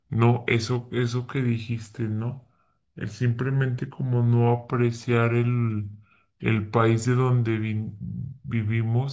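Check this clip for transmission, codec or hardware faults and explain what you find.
One fault runs throughout: a wrong sample rate. The speech plays at about 0.73 times its proper speed and sits about 5.5 semitones low, so voices sound slow, heavy and dropped in pitch. Speed and pitch shift together because the samples are clocked out slower than they were captured, with no rate conversion. The ratio fits audio recorded at 22 kHz but played back at 16 kHz.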